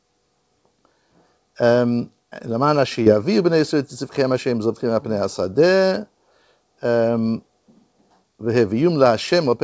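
Around 3.04 to 3.08 s there's a short concealed packet loss: about 20 ms of audio went missing and got patched over, leaving a quick smear.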